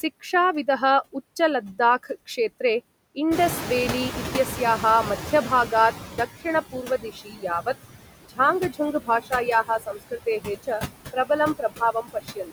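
Throughout the recording the background pumps down between phrases and swells back under the speech. These are noise suppressor artifacts: the suppressor removes about 18 dB from bands it judges to be steady noise, frame by frame.

Around 3.5 s the room noise jumps by roughly 17 dB, settling about 10 dB below the speech. From 3.31 to 6.28 s that louder noise comes through too strongly and then gradually sinks. This is the noise suppressor catching up: its noise estimate lags the rise and takes nearly 3 s to adapt, ending at about 13 dB of reduction.

From 6.72 to 7.45 s, 8.23 to 8.39 s, 8.69 to 9.33 s, 9.64 to 10.69 s and 11.58 to 12.52 s, parts of the speech turn faint and swallowed, dropping by about 16 to 22 dB at worst. This is speech cut by the noise suppressor, which mistook those speech sounds for noise and turned them down along with the background. The cuts add up to between a tenth of a second and half a second within each span.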